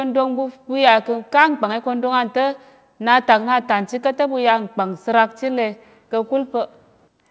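Microphone overload at 1.39 to 1.43 s: for this brief stretch of the speech the loudest peaks are flattened, giving a short, harsh crackle on the syllable. The level appears to have run about 1 dB past the converter's ceiling, likely because the input gain was set too high, so a small share of samples were clipped off at the top. Through the call path, which carries nothing above 8 kHz, the added roughness stays in the lower band.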